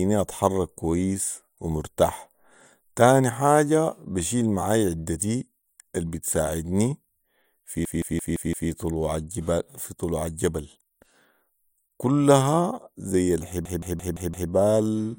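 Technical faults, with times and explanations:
7.85–8.70 s and 13.65–14.51 s, system hang loop: the same 0.17 s slice repeats exactly five times at 5.86 Hz, a machine-gun stutter that fits an 8192-sample ring buffer. The repeats are identical copies, not gaps or smeared concealment.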